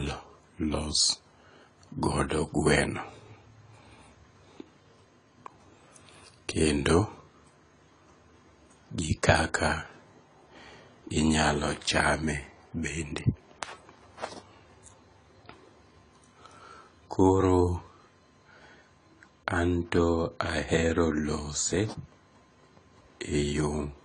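Throughout the speech, nothing is present above 10 kHz. The top octave is simply missing, so the sound is dull and closed in. The damage is plainly audible. Sibilants turn fizzy and smeared, and sustained vowels take on a warble. This is likely AAC compression, AAC-LC at a starved bitrate. The texture fits something near 24 kbps. Too few bits forced the encoder to drop the highs and coarsely quantise what remained.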